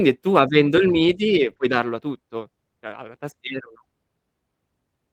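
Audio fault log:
1.49–1.51 s, lost packet rebuilt from error correction: a 20 ms stretch turns rougher and noisier without a gap, since the decoder played a low-bitrate copy carried in the next packet.
1.53–1.61 s, short concealed packet loss: two back-to-back 20 ms holes were filled by extending the preceding sound, heard as a brief smear or wobble before real audio resumes.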